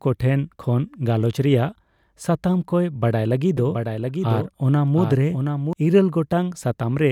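A doubled audio track runs from 3.57 to 5.73 s, after "ᱨᱮᱭᱟᱜ ᱥᱟᱛᱟᱢ ᱠᱚᱭ ᱵᱟᱲᱟᱭ". A dry copy about 5 dB quieter trails by roughly 0.7 s, likely from a slower second capture path.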